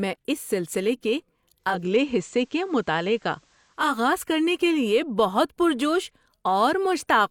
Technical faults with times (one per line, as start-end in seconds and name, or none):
1.56-3.99 digital radio blending to analogue